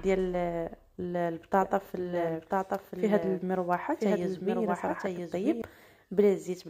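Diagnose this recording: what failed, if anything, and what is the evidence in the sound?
From 1.62 s to 5.62 s a second copy of the sound runs underneath the first, trailing it by about a second and sitting roughly 5 dB lower. The copy is full-band and dry, with no decay or room colour, and it cuts in and out abruptly at both ends. This is a doubled audio track, likely from the same signal being captured a second time through a slower path, or an edit holding two copies a fixed distance apart.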